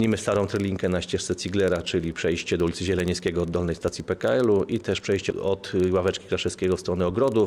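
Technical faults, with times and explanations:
Throughout: filter restarted on every block. The filter starts each 40 ms block from silence. Each restart leaves a small tick, heard as a 25 Hz buzz that tracks the level.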